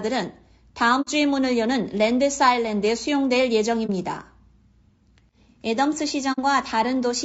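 Low-delay AAC compression runs throughout this speech, most likely AAC-ELD at around 32 kbps. Its short frames blur the pitch harmonics, leaving a rough, grainy tone with plainly audible noise between the harmonics.

AAC frame loss with muting hits at 1.01 to 1.08 s, 3.86 to 3.90 s and 6.32 to 6.39 s. Lost frames are zeroed, so overlapping windows fade the sound out and in, leaving soft-edged holes and a brief dip. The first and last gaps fit two missing frames and the middle gap fits one.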